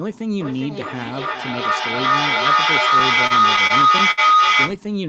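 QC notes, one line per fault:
0.4–4.84 s, feedback howl: a ringing tone near 1.5 kHz rises out of the speech and keeps growing instead of dying away, peaking about 11 dB above the talker and pulsing roughly every 0.4 s. Microphone and loudspeaker are feeding each other, and each trip round the loop adds level at the frequency it favours. On a spectrogram it is a bright horizontal line near 1.5 kHz with periodic swells. The waveform envelope climbs well above the speech peaks.
2.99–4.19 s, repeated stalls (stutter): within this stretch the audio catches and drags seven times. Packets reached the receiver late, the jitter buffer kept running dry, and each time the last bit of sound was stretched to fill the wait. The longest wait was 64 ms, and about 155 ms in all, or 13% of the span, was filled this way with nothing lost. A spectrogram shows short smeared, repeated-looking patches, and the waveform has brief flattened or duplicated segments.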